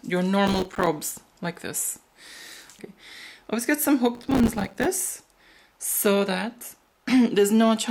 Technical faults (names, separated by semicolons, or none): processor overload crackle